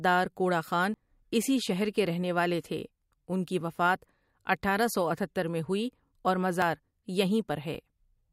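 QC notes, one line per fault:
0.94 s, 1.71 s and 6.62 s, dropped buffer (overrun): each is a jump forward in the speech with no silence, losing roughly 30, 10 and 20 ms. The likely cause is the capture program reading too late, so the hardware overwrote those samples and the surrounding audio was joined directly.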